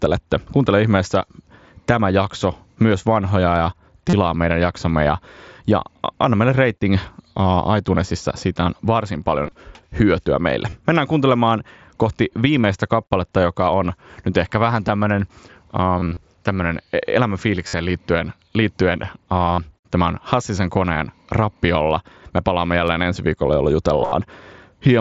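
Concealed Bluetooth headset packet loss at 4.09, 9.44, 10.70, 12.62, 15.99, 17.67, 19.54 and 24.01 s. Lost headset packets are patched by repeating the last short stretch of waveform. The losses are scattered over up to 180 ms at 9.44, 15.99 and 24.01 s. The 60 ms run at 17.67 s turns buzzy and warbles on recovery rather than dropping to silence. The mSBC link passes speech up to 8 kHz.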